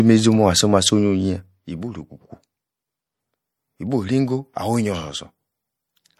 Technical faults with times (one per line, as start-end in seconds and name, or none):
0.00-6.20 MP3 compression